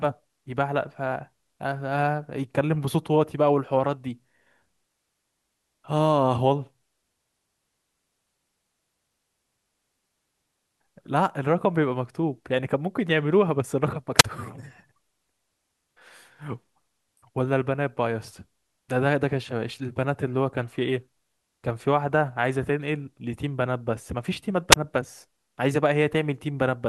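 Speech with two wireless microphone squelch dropouts, at 14.17–14.24 s and 24.71–24.76 s. A brief hiss rises into mutes of about 28 ms and 18 ms. Unlike a clean digital dropout, the hiss marks a fading FM radio signal.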